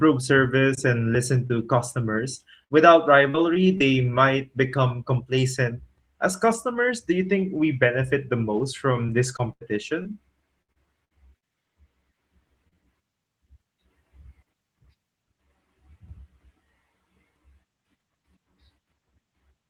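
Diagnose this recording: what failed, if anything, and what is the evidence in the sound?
The network delivered the speech stream late or incompletely twice in isolated spots, causing short concealed packet loss. Right after "service and listen", at 1.47 to 1.52 s, about 20 ms of audio never arrived, and the decoder bridged it by extending the preceding sound before blending back. At 12.68 to 12.75 s a 40 ms hole was patched the same way, with a little extra time added. Each is heard as a brief smear or wobble.

Two longer stretches show repeated packet loss, giving a choppy, robotic sound. From 2.64 to 3.82 s, ending just before "might become complacent", four holes totalling about 160 ms (the longest 65 ms) were each filled by continuing the last waveform, about 12% of the span. From 9.06 to 11.44 s, after "we benefit the most", eight holes totalling 340 ms (the longest 82 ms) cover about 13% of the span, and pieces of the speech go missing.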